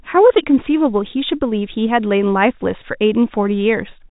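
Nothing in this speech clip stands out as a fault; it has the usual narrow G.711 telephone sound, with nothing above about 3.8 kHz, and no dropouts, clicks or other glitches anywhere along the way.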